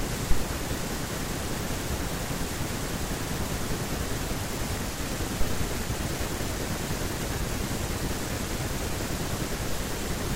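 A deep, low thump hits at 0.31 s, peaking around -9 dBFS and dying away within about 41 ms, settling by 0.49 s. A softer second one arrives at 5.41 s, around -16 dBFS, with a slower 89 ms decay that lingers to 5.81 s. Both are phantom power thumps: supply voltage switching on a live input sends a sudden DC step through the coupling capacitors, which the speech channel reproduces as a bassy pop.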